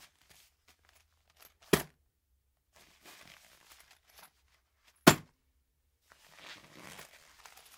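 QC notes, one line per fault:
No fault found in this clip of sounds.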